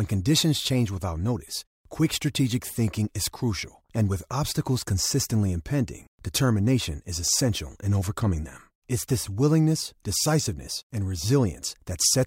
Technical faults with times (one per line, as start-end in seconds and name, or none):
none